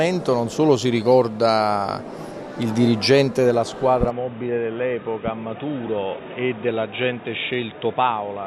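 At 4.10 s the sound turns abruptly dull and boxy with no gap, staying that way to the end. Content above 3.8 kHz vanishes, level drops around 5 dB, and a new noise floor appears, roughly 30 dB down. This is likely an input switched to a poorer device.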